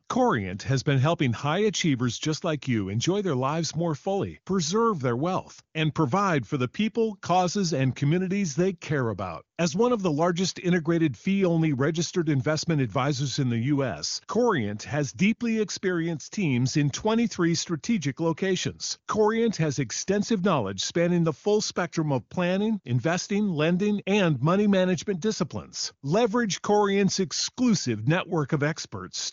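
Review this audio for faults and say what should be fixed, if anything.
Nothing needs fixing: the speech runs through the AMR wideband (HD Voice) codec at 23.85 kbit/s, a rate at which any coding damage is faint at most.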